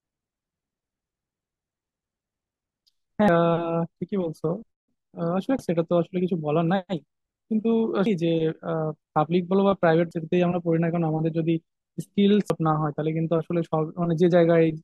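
Damaged data in a compressed stream hits the speech at 3.28, 5.59, 8.06, 10.11 and 12.5 s: the decoder loses sync on corrupted frames, leaving a chirp, squawk, click or short hole at each.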